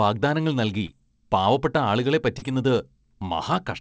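Short concealed packet loss at 0.86–0.90 s, just before "പാവപ്പെട്ട ആളുകളെ", and again at 2.38–2.44 s, right after "പാവപ്പെട്ട ആളുകളെ". Each time, audio arrived too late to decode, and the receiver extended the preceding sound for roughly 25 ms and 34 ms before blending back, leaving a brief smear. The call path's band limit, with nothing above 8 kHz, is also present.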